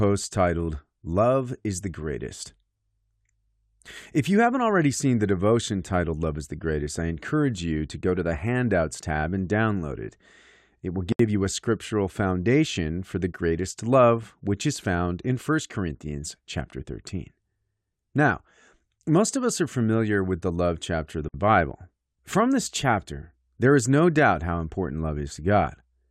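Speech clip with gaps at joins of encoded pieces: separately encoded segments were spliced untrimmed, leaving encoder delay and padding that cut in as silences, about 70 ms at 11.12 to 11.19 s before "you a scriptural foundation" and about 56 ms at 21.29 to 21.34 s after "love chapter of the".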